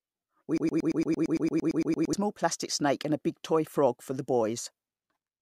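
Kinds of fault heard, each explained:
Broken-record loop: a 0.11 s fragment repeats 14 times, 0.58 to 2.13 s, replacing what should play. Likely a stalled stream resending its last piece.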